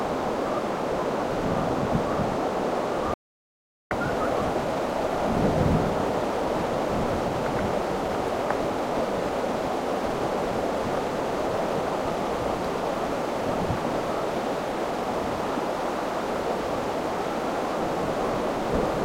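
An audio dropout to silence runs from 3.14 s to 3.91 s, about 0.77 s. The sound cuts off mid-flow into silence with no room tone, then resumes abruptly, likely because the input link or device briefly failed while silence kept being recorded.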